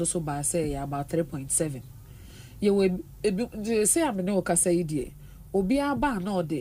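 From 4.14 s to the end, a call bitrate drop makes the audio coarser. It sounds like the encoder falling from about 64 to 25 kbps, holding lowest for 2.31 s.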